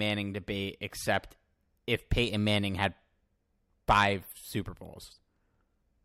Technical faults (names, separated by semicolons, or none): clock slip clicks